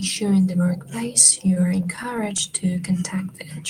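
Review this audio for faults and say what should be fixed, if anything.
Repeated stalls (stutter), 1.21–2.48 s: sixteen holds, none longer than 15 ms, where late packets drained the jitter buffer and the last sound was extended. Unlike packet loss, nothing is missing; the audio only drags. A larger or adaptive jitter buffer would prevent it.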